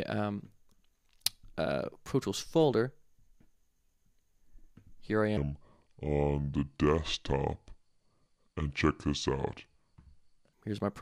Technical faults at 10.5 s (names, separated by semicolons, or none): section at the wrong speed